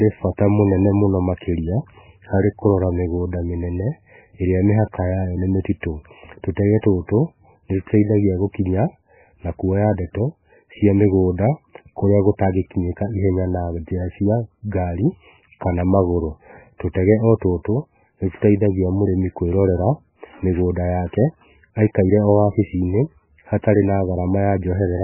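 From start to finish, the speech is band-limited and smeared. Nothing survives above 3 kHz, so the voice sounds dull and muffled. The damage is heavy. Quiet frequency detail flickers in and out, giving a watery, swirling texture, and consonant onsets blur. The likely cause is MP3 compression at a very low bitrate, perhaps near 9 kbps. Starved of bits, the encoder cut the treble at a fixed point and dropped weak components frame by frame.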